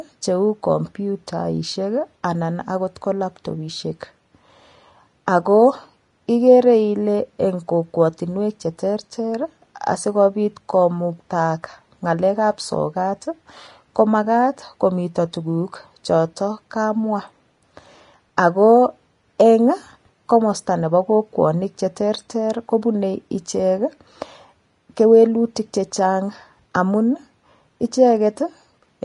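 Throughout, the speech carries plainly audible codec damage, likely from low-quality Vorbis compression at a rate that fits roughly 32 kbps. Treble detail is coarsely quantised and nothing survives above 10.6 kHz, so the sound is dull yet hissy and grainy, with roughened tones.

At 18.37 s a pre-echo appears. A sharp attack fell late in a transform block, and quantisation noise sized for the louder part spread back into the quiet moment before it. The result is a short hiss about 10 ms ahead of the onset, which blurs that attack.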